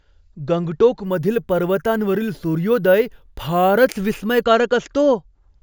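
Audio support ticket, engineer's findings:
Bright metallic fizz riding on the speech, 1.05 to 4.44 s, following its level at about 23 dB below it. Imaging from sample-and-hold upsampling: samples just repeated with no smoothing filter, which fits a 16 kHz to 48 kHz step, so mirrored spectrum copies land at 8 to 16 kHz.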